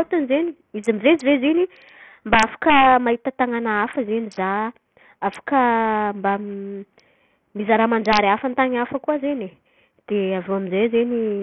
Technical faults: Bluetooth SBC compression; integer overflow

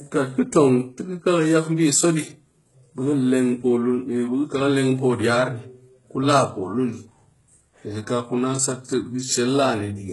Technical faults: HE-AAC compression

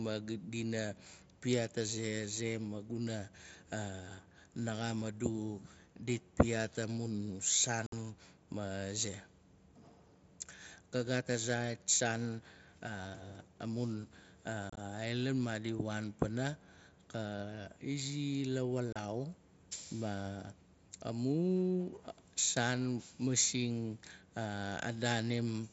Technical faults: unconcealed Bluetooth headset packet loss

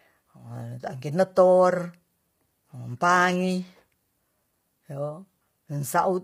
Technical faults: low-delay AAC compression

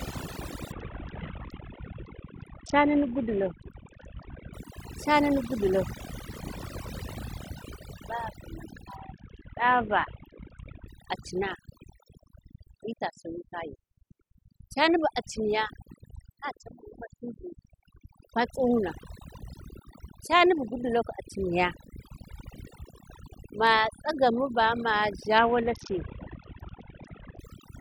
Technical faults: overdone noise removal; Bluetooth SBC bit pool drop

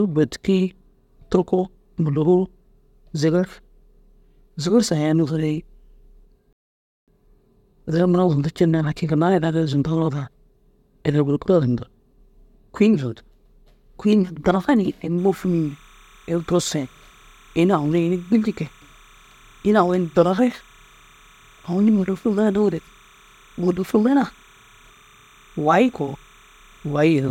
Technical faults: rebuffering stall; timecode bleed

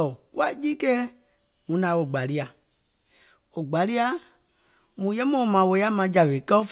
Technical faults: sudden gain jump

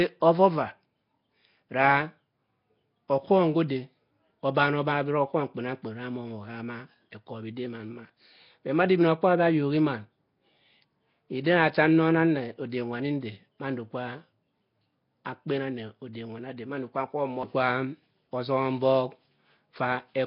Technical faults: Nellymoser compression; pre-echo

